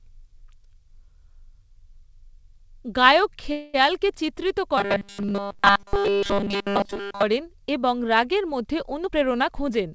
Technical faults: call audio freeze; robotic sound from repeated short buffers; jitter buffer speed-up

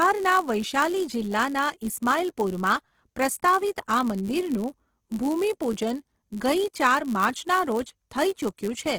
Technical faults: Opus compression; block size mismatch (padded)

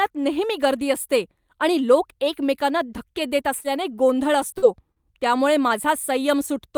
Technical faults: lost packet rebuilt from error correction; short concealed packet loss

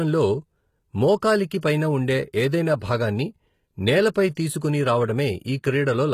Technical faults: HE-AAC compression; pre-echo

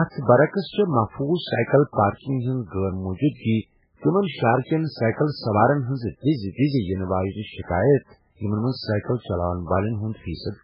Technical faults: MP3 compression

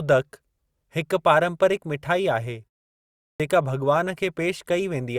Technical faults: clipped start after a pause

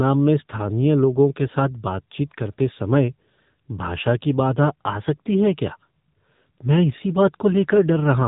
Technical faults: AMR narrowband mobile codec

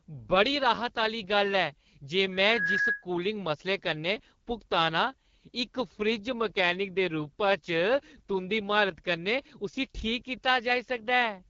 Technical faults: AMR wideband (HD Voice) codec; loudspeaker feedback squeal

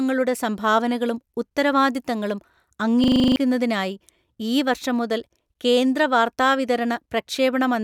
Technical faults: system hang loop

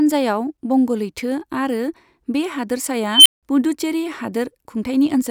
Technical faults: unstable filter

